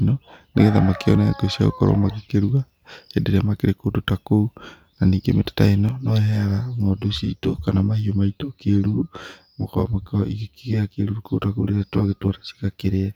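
From 5.89 s to the end, the speech turns hollow and phasey, with a fixed, combed colour. This is channel delay (comb filtering): one channel trails the other by around 10 ms, and summing them to mono carves evenly spaced notches starting near 50 Hz.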